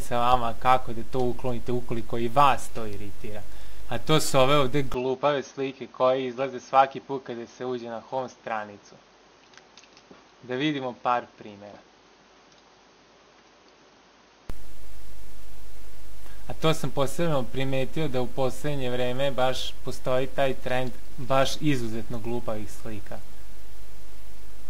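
From 4.94 s to 14.50 s the sound turns duller, with nothing above 6.5 kHz, drops about 5 dB in level and gains a faint new noise floor, with no gap at either edge. This is likely an input switched to a poorer device mid-recording, then switched back.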